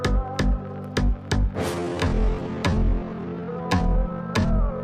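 At 1.73 s the pace suddenly drops to roughly half, 0.54 times the original speed, and stays there to the end of the clip. This is a time-stretched section, likely made by software lengthening the audio while holding pitch by repeating short pieces. The slowed part drags. Unlike a slowed-down playback or sample-rate mismatch, the pitch does not fall along with the tempo.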